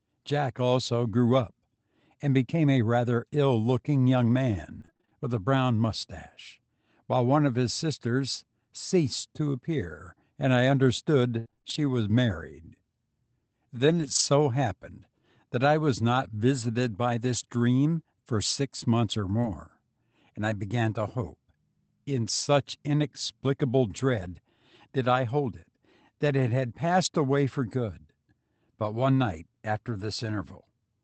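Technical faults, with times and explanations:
4.81–5.13 s, repeated packet loss (robotic sound): eight holes, the longest 27 ms, patched by extending the last sound, leave about half this span synthetic and choppy, unlike isolated hiccups.
11.39–14.21 s, scattered short gaps: roughly seven separate losses, the longest around 70 ms, each concealed alone, so the sound stays mostly clear with brief ticks and smears.
19.41–19.45 s, short concealed packet loss: a 20 ms hole is bridged by continuing the preceding sound, heard as a quick smear or wobble rather than a silent dropout.
19.43 s, 24.21–24.27 s and 27.05 s, lost packets rebuilt from error correction: low-bitrate copies from the following packets fill 20 ms, 40 ms and 20 ms without gaps, but those frames sound rougher and noisier.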